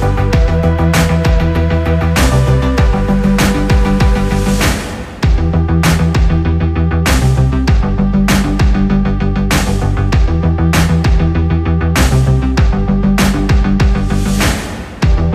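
No technical faults are audible anywhere in this audio.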